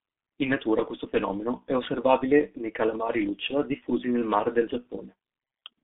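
Speech, and it's been through a G.723.1 codec for the whole clip, heavily worn by it. Nothing gets through above about 3.8 kHz, and the low end thins out below roughly 150 Hz, so you get that narrow phone-line band. At around 6.3 kbit/s with 30 ms frames, the codec's voice model can't keep up with fast changes, which is why it sounds muffled and hoarse and the consonants smear together.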